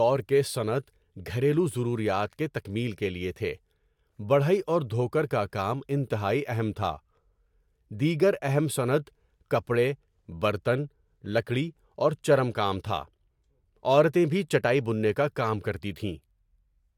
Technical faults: none

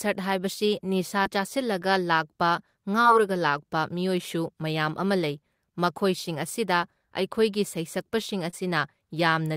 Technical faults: short concealed packet loss

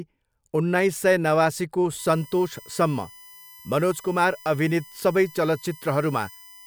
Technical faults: USB whine

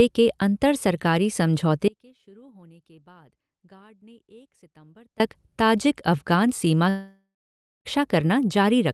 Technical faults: audio dropout to a faint residue; long network dropout

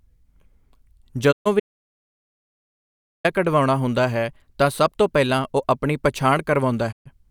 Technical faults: digital broadcast dropout; audio dropout to silence

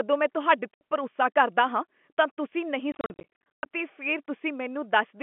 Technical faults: packet loss filled with silence

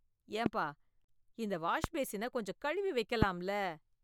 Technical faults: loud pop

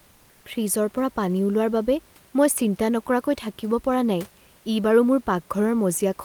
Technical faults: comfort noise in place of the background

